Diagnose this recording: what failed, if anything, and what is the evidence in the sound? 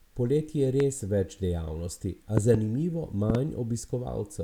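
Loud pops, likely from a plug, switch or static in the analogue wiring. One pop at 0.80–0.83 s comes just before "več dejavnosti". Double pops follow at 2.37–2.57 s, right after "več dejavnosti", and at 3.30–3.37 s. Each adds a voltage pulse roughly 15 to 20 dB above the speech. The speech continues underneath.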